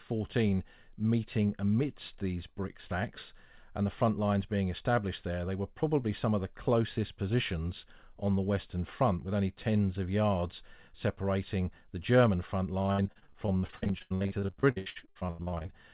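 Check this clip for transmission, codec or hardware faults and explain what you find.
One transmission fault is present, near the end of the speech. From 12.82 s to 15.70 s there is repeated packet loss (robotic sound): dozens of short dropouts, the longest about 82 ms, each bridged by extending the preceding audio. Nearly half of that stretch is concealed, so the speech turns choppy, with fragments missing. The audio has nothing above 4 kHz throughout, which points to a narrowband telephone codec such as G.711.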